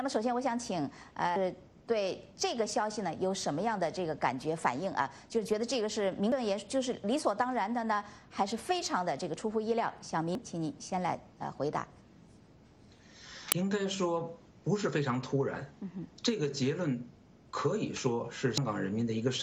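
Brief blips at 1.36, 6.32, 10.35, 13.52 and 18.58 s are damaged data in a compressed stream, where corrupted bytes make the decoder misread frames and lose sync.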